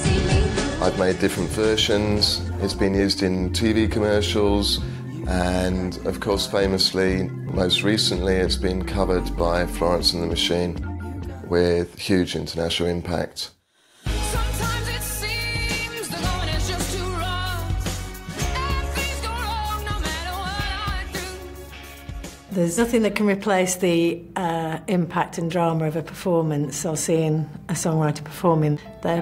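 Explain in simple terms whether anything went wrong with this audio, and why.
Nothing went wrong with this audio that a listener can hear.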